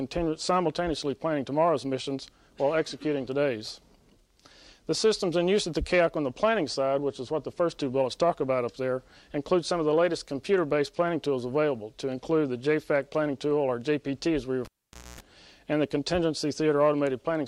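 At 14.65 s a live cable is pulled and plugged in. A pop, then about 0.51 s of near silence. A 60 Hz buzz lasts 0.25 s, then sound returns at 15.20 s.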